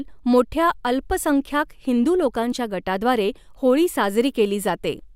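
No technical faults can be heard anywhere in this speech recording. At no point does anything in the audio stand out as a problem.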